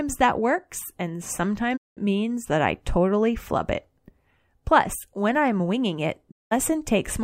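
Digital broadcast dropouts at 1.76 to 1.99 s, after "that works and", and at 6.30 to 6.53 s, after "when I'm winging it". Each time the speech fades out over 20 ms, and 192 ms of audio is lost, consistent with six failed frames.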